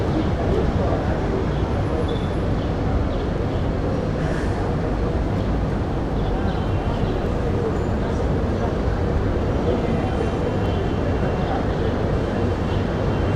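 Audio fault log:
5.38 s, 7.26 s, 10.66 s: dropped samples, three single sharp clicks where the waveform jumps abruptly, likely from a fraction of a millisecond going missing.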